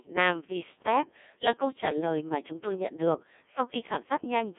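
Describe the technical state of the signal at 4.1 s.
At 4.1 s the speech is still passing through the Codec 2 vocoder, which runs for the whole clip. The decoder rebuilds each frame from transmitted pitch, voicing, energy and a coarse spectral envelope using a bank of sine waves, so the original waveform is gone. The damage is heavy, consistent with a rate near 1.6 kbit/s. The result is buzzy and robotic, confined to a line band of about 250 Hz to 3.4 kHz, with nothing above 3.8 kHz.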